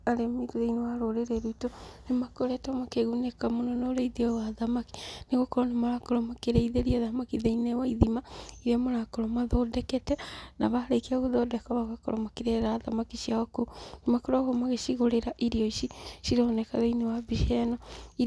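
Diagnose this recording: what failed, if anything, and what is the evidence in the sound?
Nothing failed in this recording.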